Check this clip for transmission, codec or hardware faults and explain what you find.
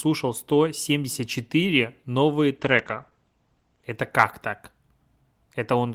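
There is one fault, a call bitrate drop in the middle of this speech clip. From 2.59 s to 3.91 s, ending just before "как так", the encoder starves for bits. The sound fits the rate falling from 32 to 12 kbps, staying at its lowest for about 1.25 s. With so few bits, Opus quantises coarsely and narrows the audio band from 20 kHz to 8 kHz, so the speech turns muffled. A spectrogram shows everything above 8 kHz abruptly blanked across that span, while the waveform changes little.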